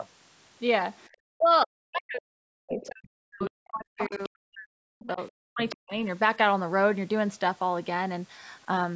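At 1.01 s a faint scrap of the other side's voice leaking through appears. This is likely loudspeaker echo that the canceller missed. It returns at 2.72, 3.39, 3.98, 5.0 and 5.69 s, loudest around 4 s.

From 1.18 to 5.96 s, speech is suppressed in double talk. The talker's voice dips and breaks up, by up to about 40 dB, for roughly three seconds in total. The likely cause is the canceller turning both voices down while the two sides overlap.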